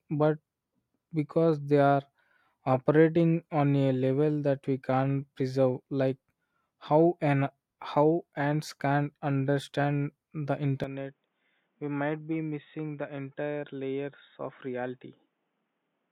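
At 10.84 s, right after "ants can't understand the", the speech abruptly turns duller and slightly quieter, with nothing above 3.8 kHz and a faint new noise floor, with no gap at the switch. This is likely an input switched to a poorer device, persisting to the end.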